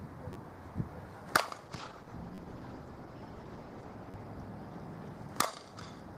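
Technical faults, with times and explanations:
0.33–0.35 s, 2.35–2.38 s and 4.11–4.14 s, repeated buffer: New audio didn't arrive in time, so the same roughly 10.7 ms chunk replays two or three extra times. That fits a 512-sample buffer. Each one lands as a quick buzzy stutter with hard joins, and about 20 to 30 ms of real audio goes missing.
1.66–5.03 s, call bitrate drop: The call's bandwidth estimate sank, so Opus fell from 32 kbps to 13 kbps and sat at the bottom for about 2.3 s. Coarser coding makes it rough and watery. The top end, which reaches about 12 kHz at the normal rate, gets trimmed, so it turns muffled until things recover.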